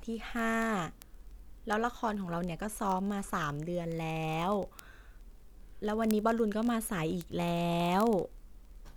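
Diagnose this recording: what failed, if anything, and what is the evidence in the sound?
A digital interface clocking fault: the receiving device on the S/PDIF, AES or ADAT link is running on its own clock instead of locking to the sender's. The two clocks differ by roughly a thousand parts per million, so they slip past each other about every 20 ms. At each slip a single sample is dropped or repeated, producing word clock ticks. These run through the speech at about fifty per second from 0.10 s to the end.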